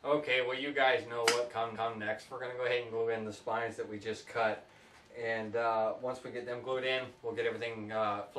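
At 1.74 s, a 232 ms block of repeated frames plays twice, consistent with a short run of compressed frames being duplicated. It is heard as a stutter that adds 232 ms to the audio. On a spectrogram, the pattern from 1.74 to 1.98 s appears again immediately afterward, like a copied tile.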